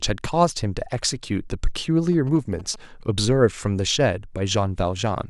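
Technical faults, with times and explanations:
2.12 to 2.76 s, GSM signalling bursts: a galloping pattern of short buzzes sits about 20 dB under the speech. A nearby 2G phone is signalling. The audio circuit rectifies its radio bursts, producing a buzz repeating at about 217 Hz.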